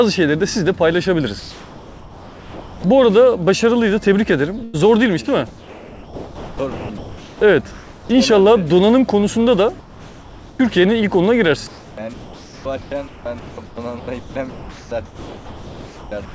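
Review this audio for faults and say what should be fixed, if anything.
At 1.40 to 2.84 s, 7.71 to 8.09 s and 9.79 to 10.59 s, the real background turns into a flat, featureless hiss about 3 to 5 dB quieter. That's likely comfort noise in place of the background from discontinuous transmission. Turning off DTX, or raising the comfort-noise level to match, would keep the room sound continuous.

A burst of packet loss hits at 4.64 to 4.75 s. About 95 ms of held, fading sound covers roughly 100 ms that never arrived. A bigger jitter buffer or forward error correction would help ride out bursts like that.

From 5.47 to 7.41 s and again from 11.67 s to the end, the sound gets choppy. That's likely sound chopped by the voice detector, cutting quiet bits out. A less aggressive voice detector with a longer hangover time would stop it clipping those edges.

Nothing comes through above 8 kHz, which fits G.722 at 64 kbps on the call path.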